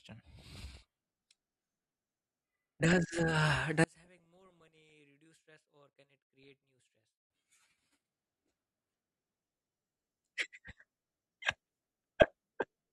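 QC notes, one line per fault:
0.38–1.31 s, 2.80–3.25 s, 4.03–4.92 s, 6.43–6.48 s, 8.19–9.15 s, 11.48–12.27 s: DAB burbling. Bit errors slip past error correction, so single sub-bands jump for a frame, giving short noise blips over the speech.
3.84–7.30 s: one channel inverted, likely. The speech drops by about 37 dB because the centred content cancels in the mono sum, leaving only the faint side difference.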